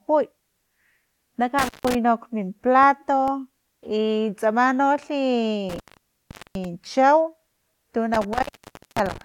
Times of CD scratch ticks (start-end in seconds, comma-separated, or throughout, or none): 2.61-3.50